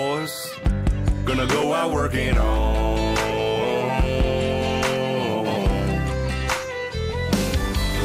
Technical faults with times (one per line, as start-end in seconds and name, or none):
none